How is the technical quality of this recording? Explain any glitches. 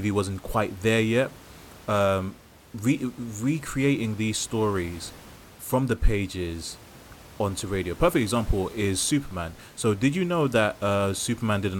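No glitches can be heard in this recording. A faint room noise sits in the background, about 23 dB below the speech, as part of the space the microphone was in.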